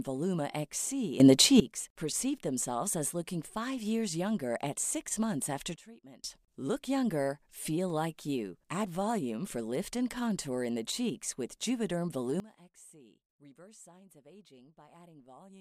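A speech clip with three sudden gain jumps, where the level steps abruptly with no fade and the background noise moves right along with it. From 1.2 to 1.6 s it leaps up by about 14 dB just before "perceived themselves as looking". After "at six months after" it drops by about 18 dB from 5.76 to 6.24 s. At 12.4 s it falls by about 22 dB and stays down to the end. The likely cause is a digital gain change applied instantly instead of ramped.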